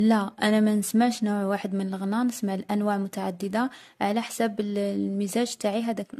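Throughout the speech, the sound is swirly, smeared and hollow, with blurred consonant onsets. This is likely generation loss: about four successive lossy encodes, consistent with AAC-LC around 64 kbit/s, each adding fresh quantisation noise and spectral holes.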